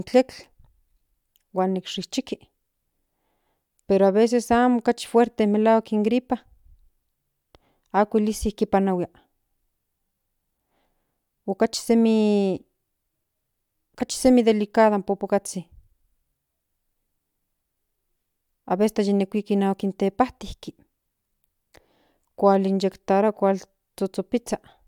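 No technical faults are audible.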